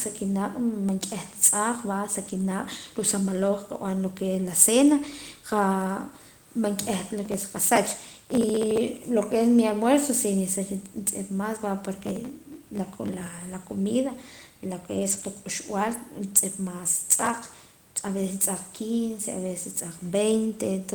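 Lost packet rebuilt from error correction at 2.25 to 2.43 s, just before "ruu' sa maloj": about 100 ms of missing audio was replaced by the low-bitrate backup copy carried in the following packets, so nothing drops out, but the sound turns briefly rough and noisy.

Processor overload crackle from 7.25 to 8.81 s, just before "lo que es mi": the processor repeatedly failed to finish very small buffers, each under a millisecond, on time. Each missed buffer was skipped, leaving dozens of hard-edged micro-gaps heard as gritty crackle riding over the sound.

The same crackle returns from 12.02 to 13.28 s.

Error-correction rebuilds follow at 14.95 to 15.21 s, just after "comida lo que", covering about 140 ms with the same coarse, noisy texture.

The crackle recurs from 17.18 to 17.75 s, and a brief 20 ms rebuild occurs at 18.07 to 18.09 s.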